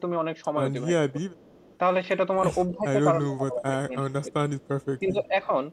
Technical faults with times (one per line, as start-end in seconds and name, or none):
1.06-1.44 speech suppressed in double talk
1.45-1.78 echo leak
2.73-4.54 speech suppressed in double talk
4.60-4.85 echo leak
5.00-5.35 speech suppressed in double talk